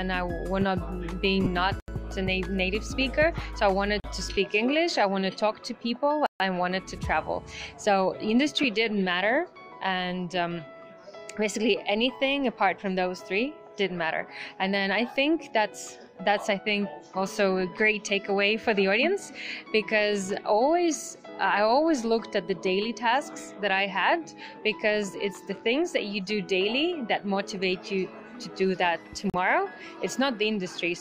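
At 1.44 to 1.46 s, about 22.5 ms of lost LE Audio frames, consistent with three 7.5 ms frames, are concealed by the LC3 decoder reusing the previous spectrum, leaving a brief noisy smear. A single lost frame at 8.63 s does the same. Blocks of digital silence, where the audio drops out to zeros, fall at 1.80 to 1.88 s (80 ms), 4.00 to 4.04 s (40 ms), 6.26 to 6.40 s (138 ms) and 29.30 to 29.34 s (40 ms). Each is an abrupt hole.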